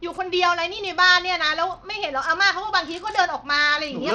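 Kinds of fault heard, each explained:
Bluetooth SBC compression: throughout the speech, plainly audible coding damage, likely from SBC starving and coarsely quantising its sub-bands at a low bitrate, consistent with about 80 kbps.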